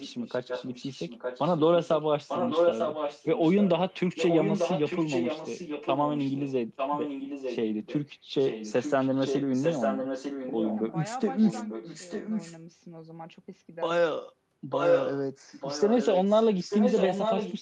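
A delayed copy of the speech trails it by about 0.9 s from 0 to 8.0 s, 8.4 to 10.9 s, 11.4 to 12.6 s (fainter), 14.7 to 15.2 s (louder than the speech itself), and 15.5 s to the end. This echo leak likely comes from a far-end loudspeaker whose echo canceller let its microphone pickup return down the call.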